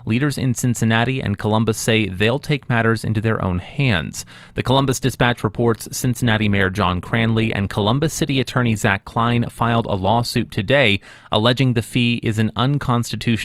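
It's a speech recording, and the fault is an adaptive stream at a lower bitrate. At 4.66 s the quality falls off abruptly, with no gap, and codec artefacts creep in. It stays that way for six seconds, then snaps back at 10.66 s. That's a player switching down to a cheaper rendition when the connection slowed, and the sound fits Opus dropping from around 64 to 24 kbit/s.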